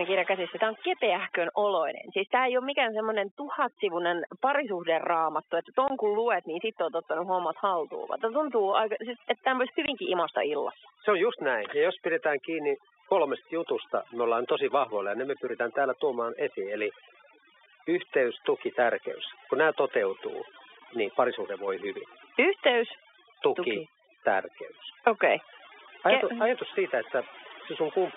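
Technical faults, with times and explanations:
Throughout: overdone noise removal. A noise reduction stage was pushed too hard and keeps driving individual frequency bands down to nothing whenever they sit close to its noise estimate. The quieter parts of the speech fall under that threshold along with the hiss, so the background collapses to near silence dotted with twinkling specks.
5.88 to 5.90 s and 9.86 to 9.88 s: packet loss filled with silence. At each point the stream lost a short run of audio, and the receiver played nothing in place of the missing data instead of concealing the gap. Each hole lasts 20 ms, which fits a single lost 20 ms packet. The speech drops abruptly to silence and returns just as abruptly, so each brief dropout is framed by hard edges.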